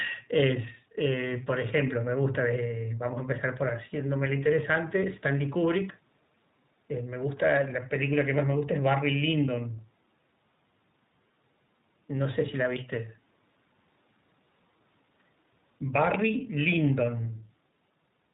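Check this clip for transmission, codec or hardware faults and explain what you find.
The speech carries one fault, present throughout: iLBC codec coding. Everything above 4 kHz is missing, and the voice sounds plainly rough and synthetic. iLBC codes each short frame's excitation on its own, which fits 20 ms frames near 15.2 kbps. That frame-by-frame graininess distinguishes it from a clean narrowband filter, which only dulls the sound.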